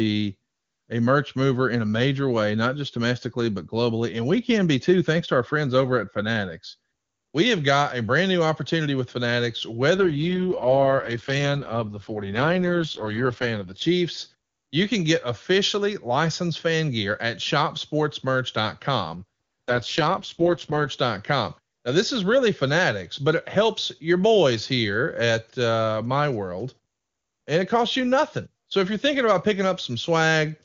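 From 9.96 to 13.82 s and again from 19.16 to 20.88 s the speech turns rough, raspy and synthetic, a pattern typical of an AMR rate drop. The sound points to the link falling from the clean 23.85 kbit/s HD Voice mode to the 6.6 kbit/s mode, trading bits for error protection. Unlike a narrowband fallback, the wideband top stays present, and unlike packet loss there are no gaps.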